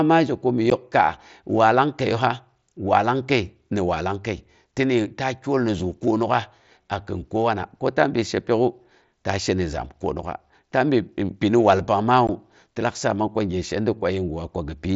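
Speech, carried over a Bluetooth headset link with mSBC wideband coding. Unconcealed Bluetooth headset packet loss leaves two 15 ms holes with abrupt edges, at 0.7 s and 12.27 s, just before "ti lak". Lost voice packets were replaced by silence or an idle pattern.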